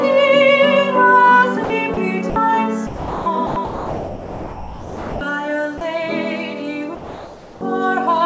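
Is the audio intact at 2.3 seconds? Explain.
No. From 2.30 to 2.36 s, about 60 ms of the sound drops out and is replaced by a steady, featureless hiss, likely sound dropped by the voice detector. The sender's detector judged that stretch to be background and stopped sending, so the receiver filled the gap with comfort noise. On a waveform, the signal flattens into a thin, even band for that span. On a spectrogram, the detail gives way to a uniform smear, still capped at 8 kHz like the rest of the G.722 call.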